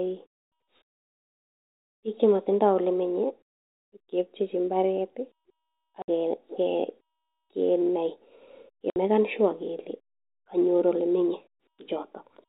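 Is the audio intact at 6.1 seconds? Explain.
No. Just before that moment, from 6.02 to 6.08 s, there is packet loss filled with silence. About 60 ms of speech vanished in transit, which fits three lost 20 ms packets, and the receiver played nothing in their place. The result is an abrupt hole with hard edges. On the waveform it appears as a flat, near-silent line cut sharply into the signal, and on the spectrogram as a clean vertical blank band across every frequency up to the 4 kHz telephone ceiling.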